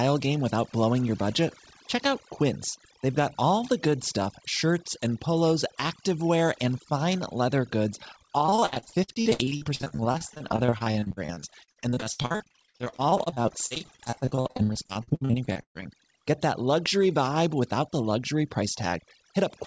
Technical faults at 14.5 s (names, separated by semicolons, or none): overdone noise removal; repeated packet loss (robotic sound)